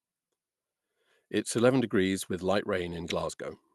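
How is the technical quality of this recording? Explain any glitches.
No glitches or faults heard.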